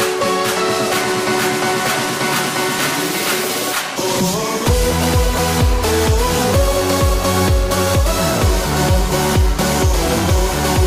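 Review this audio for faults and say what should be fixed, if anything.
No faults can be heard anywhere in this audio, so nothing needs fixing. There are no dropouts, glitches or distortion to correct.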